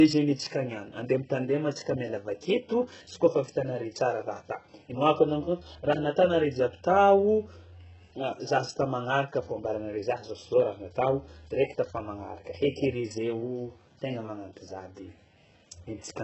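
From start to finish, the speech carries heavy codec damage. The treble is there but sounds synthetic. S sounds come out gritty and lispy, with a metallic edge. Nothing reaches above 8 kHz. The likely cause is HE-AAC compression at a very low bitrate, which fits something near 8 kbps. The codec keeps only the lower spectrum and fakes the top by copying lower bands upward. Those copied harmonics do not line up with the real ones.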